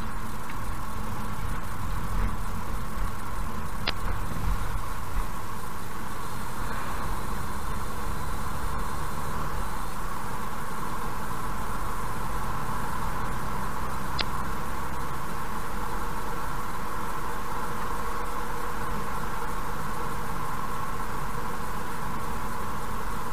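A short glitch cuts through the sound from 3.85 to 3.90 s, and a second one lands from 14.17 to 14.22 s. Both are damaged data in a compressed stream: a stretch of the encoded bytes was corrupted, so the decoder misread those frames, lost its sync and skipped forward to the next valid frame header before normal playback resumed.

Just after that, from 14.37 to 14.42 s, there is a quick stutter or click at the join, as if a sliver of sound plays twice. This comes from overlapping chunks. The audio was handled in 10-second chunks, and here the next chunk began before the previous one had finished, so about 50 ms of sound was repeated at the boundary instead of following on seamlessly.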